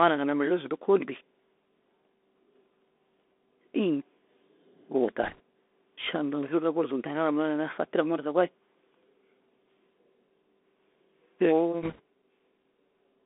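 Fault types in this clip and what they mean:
Bluetooth CVSD headset codec: The speech is carried by the narrowband headset codec, which sends one bit per sample at 64 kHz, each bit nudging the level up or down with an adapting step size. Here the band runs from about 250 Hz to 3.5 kHz, so a spectrogram shows an empty region above 3.5 kHz and thin lows. The damage is plainly audible: granular hiss under the speech, scratchy s sounds, and distortion where loud high content outruns the step.
Bit errors on a Bluetooth voice link: Flipped bits on the headset link, heard as short bursts of rushing, crackly noise at 5.23 to 5.40 s and 11.82 to 12.00 s. Since every CVSD bit carries the same small weight and errors fade quickly, there are no sharp clicks, and the waveform shows no spikes, only fuzz over the signal. The second burst is rougher, with an error rate near 3 percent against about 1.5 percent in the first, and on a spectrogram each burst shows as a brief wash of broadband noise inside the band.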